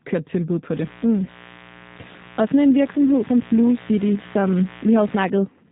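Throughout, the speech carries G.729 codec damage at 8 kbit/s: a rough, slightly synthetic texture with nothing above 4 kHz. This is model-based resynthesis, not plain low-pass filtering.

From 0.74 s, right after "kørt tilbud på", until 5.29 s, a mains buzz sits well below the speech. Its raspy 60 Hz harmonics come from switching spikes, unlike a smooth, pure hum.

At 1.24–1.32 s, VoIP packet loss concealed by the speech codec covers a 20 ms gap, which fits a single lost packet. The decoder extends the last pitch and filter into a fading sound, and the voice stays weak briefly afterward, rather than cutting to silence.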